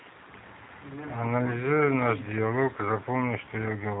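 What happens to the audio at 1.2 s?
At 1.2 s the G.729 codec damage is plainly audible, as across the whole clip. Nothing passes above 3.8 kHz. Speech rebuilt from a filter and sparse pulses sounds rough and synthetic, fitting an 8 kbit/s codec.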